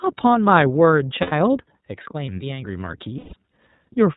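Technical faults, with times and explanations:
Throughout, iLBC codec: the speech is band-limited to 4 kHz and sounds slightly rough and synthetic. The damage is plainly audible, and the coding fits iLBC's 30 ms frame mode at about 13 kbps. Each frame's excitation is coded independently, which sets it apart from codecs that smear errors across frames.
1.22–1.33 s and 3.17–3.34 s, lost iLBC frames: each gap becomes a held, faintly buzzy vowel, 90 ms long and then 150 ms long. This fits three and then five lost 30 ms frames, filled by repeating the last pitch cycle with added noise. Unlike dropouts from codecs that depend on earlier frames, normal sound returns almost at once.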